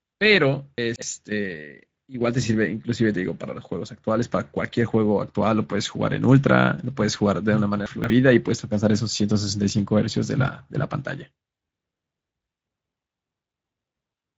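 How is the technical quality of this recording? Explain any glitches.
The recording has audible codec damage throughout and two brief scrambled moments.

Speex codec, throughout: this speech has been through Speex at a middle setting, which fits a bitrate around 17 kbps. The CELP coder has too few bits to model the excitation faithfully, so the voice sounds noisy and hoarse. Nothing is present above 7.7 kHz, and the region between 4 kHz and that ceiling is only a shaped, noise-like fill rather than real detail.

Chunks out of order, 0.78–1.02 s and 7.86–8.1 s: in each spot a 60 ms piece of audio plays late, after the pieces that should follow it, which fits a delay of three chunks. No sound is missing, but the sequence is wrong and there are hard joins between pieces, so each moment comes across as a short garbled jumble.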